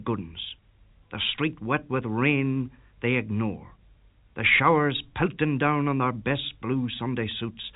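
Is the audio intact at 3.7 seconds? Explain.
Yes, the audio is intact at 3.7 seconds, with only the expected telephone-band sound of G.711 coding, which passes nothing above about 3.8 kHz.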